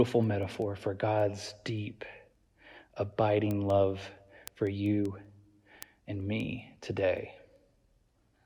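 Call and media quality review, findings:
Sharp ticks of uneven strength, roughly every 0.2 s, 0.24–8.33 s: word clock ticks. Digital receiver unlocked from the sender's clock, about 100 ppm apart, slipping single samples.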